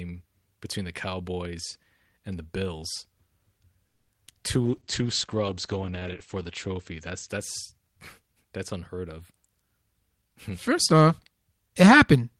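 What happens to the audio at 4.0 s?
A call audio freeze runs from 3.87 to 4.10 s. The speech stops advancing and its last sound is stretched into a fading buzz that ends in about 50 ms of near-silence, about 210 ms in all. Speech then resumes exactly where it stopped, with nothing lost but everything after it about 210 ms late. The likely cause is packets stalling in transit and the jitter buffer running dry. A spectrogram would show frozen horizontal bands that fade into a blank strip before normal speech texture returns. A waveform would show a decaying tail and then a flat gap.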